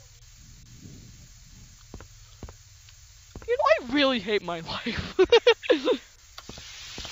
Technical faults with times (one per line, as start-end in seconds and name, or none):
none